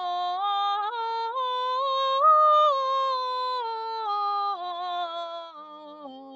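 Across the whole piece the music pumps and flutters, with sustained tones and reverb tails sinking by a swing of around 5 dB while attacks punch through. A noise suppressor built for speech was applied to this music, treating its steady tones and ambience as noise. From 5.35 s to the end the sound is cut by the noise suppressor more heavily, dropping by up to about 12 dB; the suppressor judged this material to be noise and pulled it down. The top end stops at 8 kHz, which is the normal limit of the call path.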